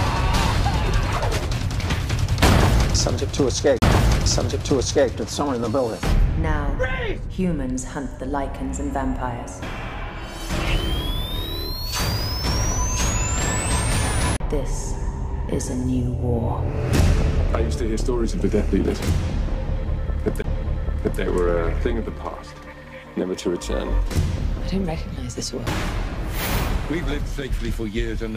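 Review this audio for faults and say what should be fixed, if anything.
CD skips at 3.79–3.82, 14.37–14.40, 20.42–20.44 and 25.66 s: the laser jumps tracks, giving a brief mute of about 5 to 40 milliseconds, then resumes elsewhere. Re-rip on a clean, isolated drive with secure error-correcting extraction.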